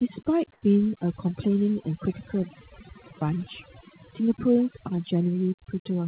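A speech recording that has gone through a telephone-style call path, with nothing above 4 kHz, which fits a narrowband G.711 codec. Throughout, overdone noise removal leaves the background lowered but flecked with twinkling specks, while the quieter parts of the voice are pulled down with the noise. That flickering, band-by-band pumping is what separates it from a simple low-level gate or a band-limited line, which would not sparkle. From 0.53 to 0.62 s, a 90 ms stretch of the background is replaced by a smooth, even hiss, about 1 dB quieter than its surroundings and roughly 45 dB below the loudest speech. This is likely comfort noise in place of the background, generated by the receiver during a transmission pause. It differs from the noise-removal artefacts because it is steady and featureless instead of glittering.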